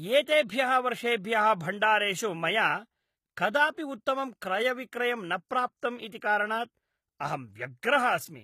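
Speech, with plainly audible codec damage running through the whole clip, most likely from HE-AAC compression at a low bitrate, which fits roughly 20 kbps. Only the lower spectrum appears to be coded directly. The treble above it is rebuilt by copying lower bands upward under a coarse envelope, so its harmonics fail to line up across the crossover. On a spectrogram, energy stops cleanly at 14.9 kHz, and the upper band shows blocky, repeated copies of lower patterns rather than natural detail.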